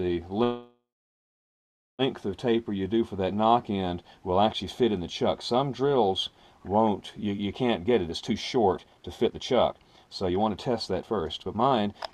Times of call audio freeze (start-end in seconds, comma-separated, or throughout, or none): 0.43-2.02